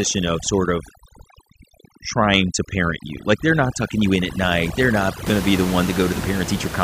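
From the start to 5.27 s the speech sits over near-silent, twinkling gaps: overdone noise removal, switching off bands it mistook for room noise.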